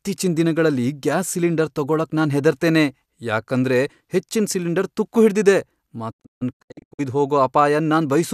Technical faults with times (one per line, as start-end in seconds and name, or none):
6.10-7.01 digital broadcast dropout